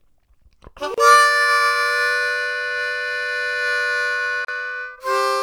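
At 0.94 s the sound drops out for about 34 ms, then picks up right where it left off, and it happens again at 4.45 s for about 37 ms. Both are gaps at a join of encoded pieces: separately encoded chunks were butted together without trimming, so each one's start-up delay and last-frame padding got left in as silence. You hear a short hole whose edges are smeared by the codec.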